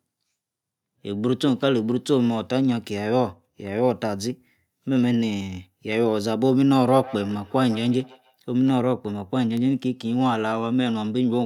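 A speech recording in which, from 6.67 to 8.38 s, each syllable is followed by a faint repeat of itself about every 150 ms, sitting roughly 18 dB below the speech. This is feedback echo between two devices: a second device in the same room replays what the first microphone sent, that microphone captures the playback again, and its echo canceller cannot remove audio it never played itself.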